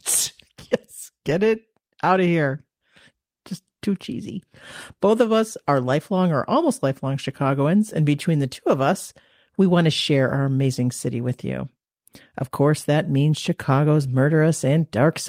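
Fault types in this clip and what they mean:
No technical faults can be heard in this speech recording; the signal stays continuous and stable throughout.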